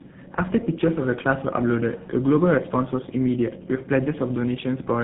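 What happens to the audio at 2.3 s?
At 2.3 s the speech sounds rough, muffled and warbly, with nothing above about 3.8 kHz, and this is present for the whole clip rather than starting there. This is tandem speech coding. The character points to two lossy speech codecs in a row, likely AMR narrowband followed by GSM full rate, with a plain telephone-band link in between. The second coder re-encodes the first one's already degraded output, so their artefacts compound.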